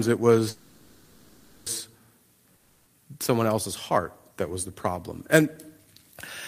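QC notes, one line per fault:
0.49 to 1.68 s, call audio freeze: the sound stops moving forward and the last fragment is drawn out as a fading buzz for about 1.2 s, with no true silence. When it resumes, it picks up exactly where it stopped, so nothing is lost; the speech after it simply arrives about 1.17 s later. The likely cause is packets held up in transit until the jitter buffer ran dry. Unlike a dropout, the speech has a pause inserted but no part cut out.
2.56 to 2.88 s, long network dropout: the last sound is again stretched into a decaying buzz, about 0.3 s long, ending in roughly 10 ms of silence. When the audio returns it has jumped ahead, and about 300 ms of speech never plays. The likely cause is a run of packets that never arrived at all. What separates it from the freeze is the skip: the timeline stays on schedule, but the content in the gap is gone.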